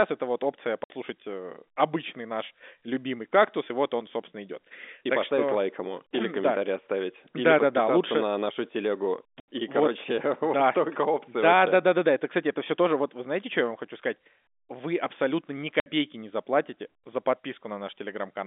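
Packet loss filled with silence cuts holes at 0.84 s after "это вот опция" (60 ms), 9.4 s after "лучше на нашу телегу" (80 ms), and 15.8 s between "абсолютно ни" and "не заплатите за" (60 ms). These are steps that fit 20 ms packets. Each gap shows as flat-line waveform breaks and blank vertical spectrogram stripes within the 4 kHz-capped telephone band.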